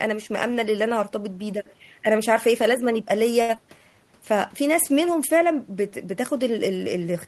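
A short stall from a late packet runs from 3.41 to 3.51 s. A packet missed its slot, the jitter buffer emptied, and the receiver held the last sound for 74 ms until the packet arrived, then resumed where it left off. Nothing is lost, but the sound hangs with a faint buzz or dip.

Short concealed packet loss follows at 3.55 to 3.58 s. About 40 ms of audio never reached the decoder, and with the delay then cut by roughly 30 ms, only 9 ms was filled by extending the preceding sound before blending back. It comes across as a brief smear or wobble, and a short consonant may drop out.

A jitter buffer slow-down spans 3.78 to 3.97 s. To rebuild its reserve, the receiver repeated single pitch periods and slivers of pause, adding 44 ms so the speech plays at 81% speed. Pitch stays the same, but the sounds stretch out.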